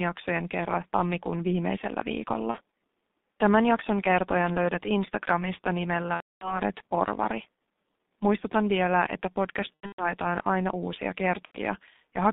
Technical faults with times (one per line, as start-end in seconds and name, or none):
0.00-12.32 G.723.1 codec
2.51-2.57 VoIP packet loss concealed by the speech codec
6.14-6.60 VoIP packet loss concealed by the speech codec
9.74-10.03 VoIP packet loss concealed by the speech codec
11.45-11.59 VoIP packet loss concealed by the speech codec